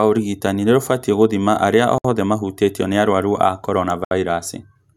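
A brief hole of silence cuts into the speech at 1.98 to 2.05 s (about 64 ms) and again at 4.05 to 4.11 s (about 67 ms), edges smeared, with the sound resuming where it stopped. This is a gap at a join of encoded pieces: two-second segments were encoded separately and butted together, leaving each encoder's start-up delay and final-frame padding in place.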